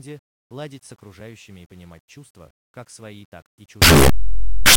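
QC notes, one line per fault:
3.82–4.77 s, signed and unsigned mixed up: after "как свои так и" to the end, the speech becomes a very loud, harsh distortion with quiet parts as loud as the rest. Likely the 8-bit samples were read with the wrong sign convention, flipping the top bit so each zero crossing jumps across the full range.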